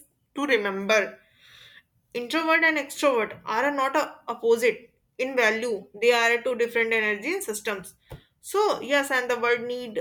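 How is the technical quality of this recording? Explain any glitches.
The recording has two drift correction steps. From 0.38 to 0.89 s, speech slows by about 6% and drops about a semitone. From 5.78 to 6.51 s, just before "different energy systems", it speeds up by about 6% and rises a semitone. Both then snap back, likely from a clock-matching resampler abruptly changing the playback rate to manage its buffer.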